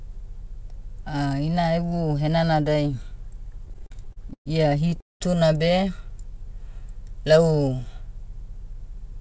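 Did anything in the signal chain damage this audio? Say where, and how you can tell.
Yes. Repeated stalls (stutter) occur from 3.66 to 4.48 s and from 4.88 to 5.22 s, caused at the network and jitter-buffer stage. The first span has 11 short holds totalling 277 ms, the longest 122 ms. The second has 4 holds totalling 224 ms, one lasting 200 ms and fading. Packets arrived late, the buffer ran dry, and the receiver stretched the last sound until data returned. Nothing is lost, but the sound drags and judders.

A jitter buffer speed-up runs from 8.41 s to the end at 9.20 s. The audio plays about 5% fast with its pitch unchanged, so it sounds slightly hurried. The buffer held more than its target, as happens when late packets arrive in a bunch. The receiver trimmed it back by cutting out pitch-period-sized slices, a few tens of milliseconds in all. The band-limit at 8 kHz comes from the G.722 call codec.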